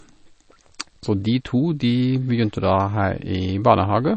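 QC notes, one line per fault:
Throughout, MP3 compression: the speech has nothing above 8.3 kHz, and the damage is plainly audible as a watery, swirling texture with chirpy, metallic sibilants and smeared consonant attacks. The likely cause is an MP3 encoder starved of bits, which fits a rate around 32 kbps, cutting the treble and switching weak frequency lines on and off between frames. Those flickering artefacts set it apart from a clean low-pass filter, which would only dull the sound.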